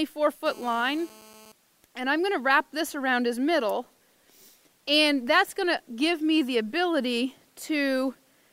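From 0.46 to 1.52 s there's GSM phone buzz: a steady, raspy 217 Hz rasp, about 24 dB under the signal, from a nearby phone's call bursts rectified in the audio circuit.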